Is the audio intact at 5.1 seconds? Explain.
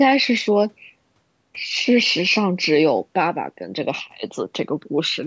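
Yes, at 5.1 seconds the speech is intact, passing through the call's microphone processing as expected with no fault at that moment.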